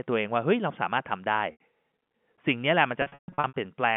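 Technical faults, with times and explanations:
1.52 to 1.57 s, packet loss with pitch repetition: roughly 80 ms of packets went missing, and the receiver looped the last pitch period, producing a brief held, buzzy tone.
3.02 to 3.54 s, packet loss with pitch repetition: scattered losses totalling 380 ms, longest run 140 ms, were bridged by repeated pitch periods that fade toward silence before the sound cross-fades back.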